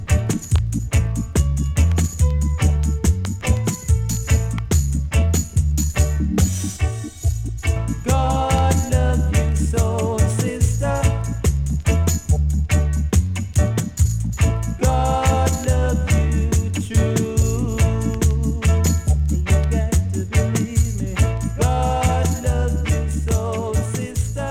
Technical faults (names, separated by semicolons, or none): channel delay (comb filtering)